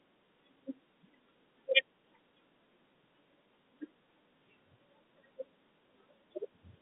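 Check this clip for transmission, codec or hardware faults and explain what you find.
No transmission, codec or hardware faults can be heard in the speech. The G.711 telephone coding is audible as a narrow line band running from about 150 Hz up to 3.7 kHz, with nothing present above 3.9 kHz.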